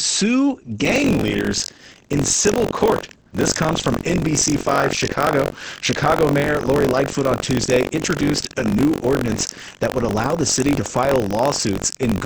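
A speech clip carrying Opus voice compression from start to finish. It runs at 10 kbps in SILK mode, wideband, with nothing above 8 kHz. The coarse excitation coding leaves the voice muffled, hoarse and slightly robotic, and the damage is heavy. From 0.83 s to the end there is buffer tearing. The writer and reader of the playback buffer have slipped, so a small slice of each buffer holds audio from roughly 70 ms earlier. The hard joins make a steady 46.9 Hz buzz, which fits a 1024-sample buffer.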